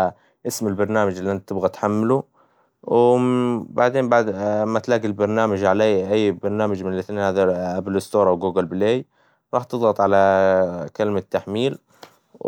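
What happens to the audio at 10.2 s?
Nothing goes wrong at 10.2 s; the speech carries on intact there, with no dropout, click, distortion or other fault.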